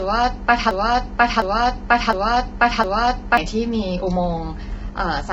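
From the start, the speech sounds rough and grainy. Noise fills the gaps between the pitch harmonics. Nothing is heard above 7.8 kHz, so the top end is dull and cut off. This points to heavy low-delay AAC compression, likely AAC-ELD as used in video calls, at a rate near 16 kbps. Its short frames resolve pitch poorly, and too few bits are left to keep the voice clean.

At 0.71 s a broken-record loop begins and runs to 3.37 s. A fragment of 0.71 s plays four times, back to back, with no change. The stall likely came from a player, encoder or stream that froze and kept resending the last piece it held. The speech that should have filled those seconds is gone. Normal playback resumes at 3.37 s.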